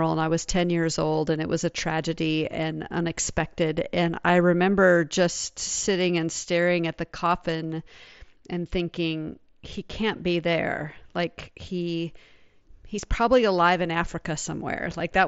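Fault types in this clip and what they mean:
No faults can be heard in this speech clip.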